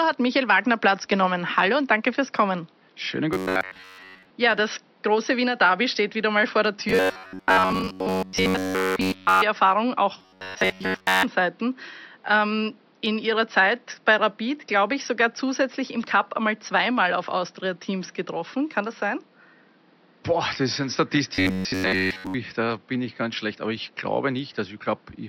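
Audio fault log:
3.33–4.30 s, 6.89–9.42 s, 10.20–11.24 s and 21.35–22.35 s: robotic sound from repeated short buffers. The speech becomes a rigid, metallic buzz at about 93.8 Hz that only loosely follows the words. This is likely caused by audio arriving too late, with the playback repeating a fragment of roughly 10.7 ms, which fits that buzz frequency, while most of the real audio is skipped. The room noise, about 35 dB below the speech, persists underneath.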